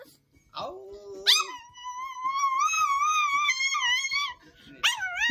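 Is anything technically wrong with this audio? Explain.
Yes, a noise suppressor tuned for speech is acting on this audio and treating parts of it as noise.

Noise suppressor applied to music or sounds runs through the whole clip. The suppressor keeps estimating a noise floor and pulling down whatever looks steady, so held tones, ambience and decays are repeatedly lowered while sharper onsets pass. The gain moves by somewhere around 5 dB, which comes across as pumping and a thinned, fluttering body.

Sound cut by the noise suppressor occurs from 0.08 to 0.54 s. Here the suppressor judged the sound to be noise and attenuated it far more heavily than elsewhere, with the deepest cut reaching about 12 dB. Roughly 0.4 s of that stretch is affected, so the sustained part sinks or its decay is clipped short, leaving the sound quieter than what surrounds it.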